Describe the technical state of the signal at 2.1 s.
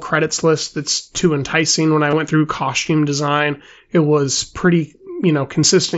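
Concealed Bluetooth headset packet loss from 2.10 to 2.13 s: about 22 ms of packets went missing, and the phone filled the gap by repeating recent waveform, giving a brief buzzy tone with a slight warble on recovery.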